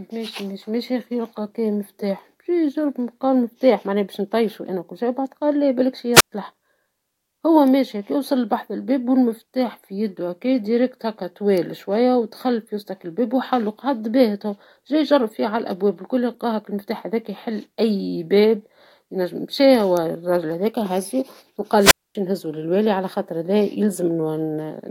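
At 6.14 s, after "بعد قال لا بلاكشي", a wireless microphone squelch dropout mutes the speech for about 120 ms. It recurs at 21.78 s, after "مشى والراجل هذاكا وهزو" and before "نهزو للوالي على خاطر", muting for about 243 ms. The radio signal faded until the receiver's squelch cut the output, heard as a brief rise of hiss and then near silence. On a waveform each dropout is a flat gap, and a spectrogram shows a broadband noise smear followed by an empty column.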